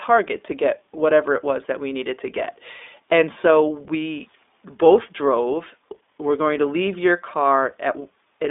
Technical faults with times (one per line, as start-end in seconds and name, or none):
0.00-8.51 iLBC codec